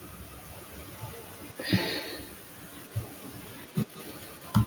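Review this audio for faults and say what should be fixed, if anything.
Echo with no canceller runs throughout the speech. The far end's loudspeaker is feeding its microphone, and the speech returns roughly a fifth of a second later as a thin copy about 22 dB down, shadowing every phrase. Enabling acoustic echo cancellation at the far end, or having that listener use a headset, would prevent it.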